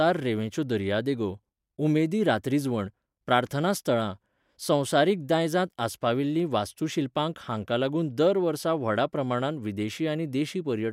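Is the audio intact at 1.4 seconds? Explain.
Yes, the audio is intact at 1.4 seconds, with no fault to be heard at that moment.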